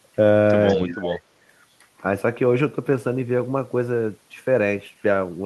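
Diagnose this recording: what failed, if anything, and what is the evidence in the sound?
From 0.67 to 0.75 s a faint copy of the speech returns about 194 ms late, roughly 25 dB down. This is likely an echo leak: the far end's echo canceller in call processing passed residual loudspeaker pickup.

Between 0.73 and 1.23 s the speech dips by up to around 20 dB. This is likely speech suppressed in double talk: the call-processing echo canceller treated overlapping talk as echo and attenuated it.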